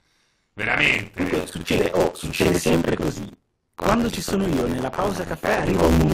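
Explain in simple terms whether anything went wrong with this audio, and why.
Something goes wrong throughout the speech: buffer tearing. The program writing the audio buffer and the hardware reading it have slipped out of step. About half of each chunk replays sound from roughly 50 ms earlier. That causes a robotic buzz at 86.1 Hz, which fits a 512-sample buffer.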